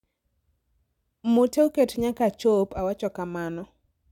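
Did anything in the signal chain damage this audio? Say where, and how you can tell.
No, no signal-chain damage detected.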